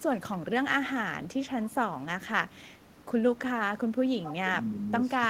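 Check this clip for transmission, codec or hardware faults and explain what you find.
Two faults are present: echo leak and speech suppressed in double talk.

Echo leak appears at 0.0–0.53 s, 1.23–2.07 s, 2.46–3.39 s, 3.76–4.32 s and 4.66–4.85 s. A copy of the speech trails it by 248 ms. It is likely far-end loudspeaker pickup that the echo canceller failed to remove. It sits roughly 15 to 40 dB below the speech, loudest near 3.8 s.

Speech suppressed in double talk runs from 4.07 s to the end. Both sides are talking at once. The echo canceller likely cannot tell the talker from the echo, so it turns both down. The speech dips, dropping around 25 dB at its deepest.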